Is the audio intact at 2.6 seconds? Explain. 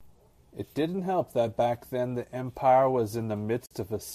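Yes, at 2.6 seconds the speech is intact, with nothing there beyond the light, even texture of what is likely low-delay AAC coding that runs through the whole clip.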